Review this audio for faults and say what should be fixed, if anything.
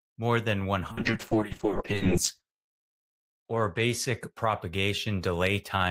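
A call bitrate drop runs from 0.96 to 5.05 s, after "more than". Highs above 8 kHz vanish and the speech turns rough, which fits a fall from 32 to 7 kbps. To prevent it, give the bandwidth estimator more headroom so the encoder isn't starved.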